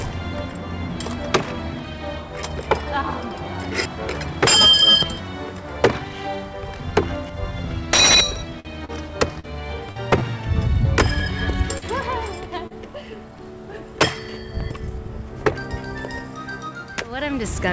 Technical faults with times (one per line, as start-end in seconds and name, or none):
8.60-8.97 short stall from a late packet
9.40-9.46 short concealed packet loss
9.91-9.99 short concealed packet loss
11.78-11.85 short concealed packet loss
12.67-12.73 short concealed packet loss